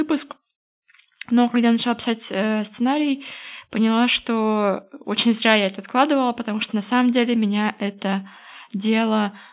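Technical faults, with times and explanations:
No technical faults can be heard in this speech recording.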